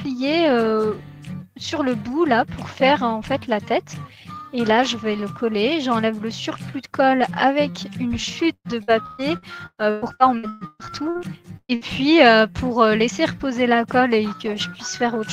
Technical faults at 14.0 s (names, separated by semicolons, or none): none